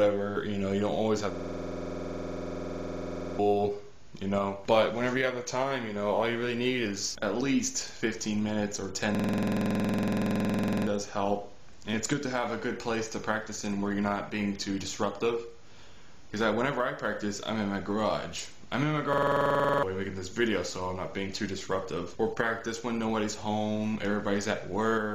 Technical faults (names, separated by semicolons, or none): system hang loop